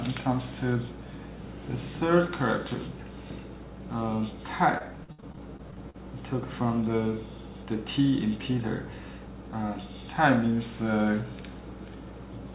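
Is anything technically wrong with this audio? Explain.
Yes. Between 4.78 and 5.96 s there is repeated packet loss, heard as robotic sound. Ten short gaps land in that stretch. The longest lasts 62 ms. Each hole was patched by repeating the preceding sound, so 260 ms is concealed, about 22% of the span. Another 280 ms is simply missing. The result is choppy and robotic, with pieces dropped. The audio came through a call path, and nothing above 4 kHz survives, which fits G.711 A-law at 64 kbps.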